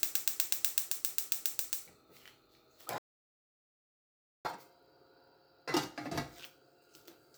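At 2.98 s the sound stops dead. Silence holds until 4.45 s, a gap of about 1.47 s. This is a playback stall. The audio simply drops out in mid-flow with no fade. The likely cause is a player that ran short of data or had its output thread blocked. It could not feed the output device, so nothing came out. When it recovers, the sound resumes from where it left off.

From 4.45 s to the end, the audio runs fast. This is catch-up at higher speed. The player is working through the backlog left by the stall. It resamples to play 1.1 times faster. Because speed and pitch are tied together here, everything sounds raised by about a semitone and a half. The sounds feel slightly hurried and brighter. This lasts for the rest of the clip.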